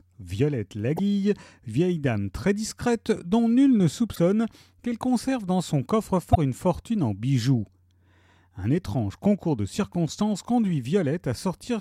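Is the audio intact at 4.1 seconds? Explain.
No, there's damaged data in the compressed stream from about 4.12 to 4.19 s. A 70 ms stretch of corrupted bytes throws the decoder off, so it misreads those frames and hunts for the next frame header, leaving a short glitch in the audio: a chirp, squawk, click or brief hole.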